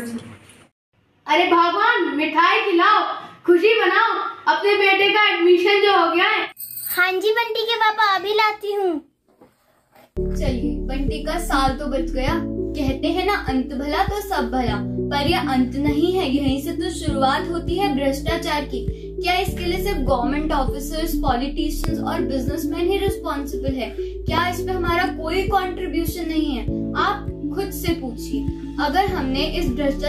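At 21.84 to 21.86 s, a loud pop cuts through the sound. It is a single sharp click, roughly 15 dB above the surrounding level. The sound carries on underneath without a break. A second identical pop lands at 24.38 to 24.40 s. Each lasts about 20 ms. The likely cause is a sudden voltage pulse, such as static or a switch or plug contact, added to the signal and shaped by the circuits that follow.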